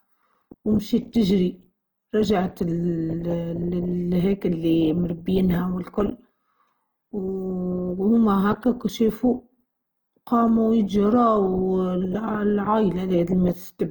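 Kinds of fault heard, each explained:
Opus compression: The damage is plainly audible throughout the speech. It sounds grainy and rough rather than swirly. The likely cause is Opus coding in its music mode. That mode keeps the energy of each band. When bits run short, it fills starved bands with folded copies or noise, so fine detail turns noisy. Sound still reaches about 20.2 kHz, so the band has not narrowed. The roughness fits a low rate near 24 kbps.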